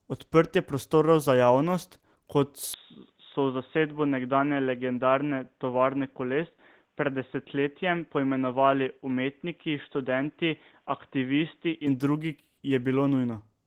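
From the first moment the whole clip carries Opus voice compression at 16 kbps in hybrid mode, meaning the speech below 8 kHz goes through the SILK predictive coder and a CELT layer covers the top of the fullband range. At that rate the excitation is coded coarsely in 20 ms frames, and you can plainly hear it: the speech comes across a bit hoarse and slightly robotic, with a muffled edge.

At 2.73 s the sound suddenly narrows, and it stays that way until 11.87 s. Nothing above 3.8 kHz gets through in that stretch, so the speech turns dull and boxy on top of the codec roughness. There's no gap at either change and the loudness doesn't shift, but a faint new background noise appears, sitting far below the speech. The likely cause is that the input switched to a poorer device, such as a headset's call profile, and then switched back.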